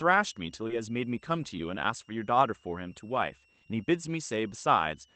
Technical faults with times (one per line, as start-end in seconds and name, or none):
0.00-5.15 switching supply whistle
0.67-0.70 short concealed packet loss
4.50 short concealed packet loss